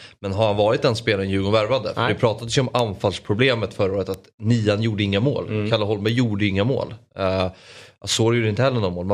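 Bit error spikes at 2.79 s (after "det pratades ju om"), 4.14 s and 6.09 s: a flipped bit throws one to three samples to about -8, -8 and -14 dBFS, each heard as a sharp broadband tick.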